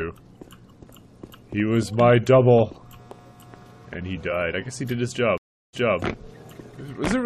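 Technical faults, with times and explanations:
5.38–5.99 s, stream reconnect: a 354 ms silence, then the audio restarts 255 ms earlier and repeats material, so it is a fresh decoder joining a resent burst, not a simple dropout.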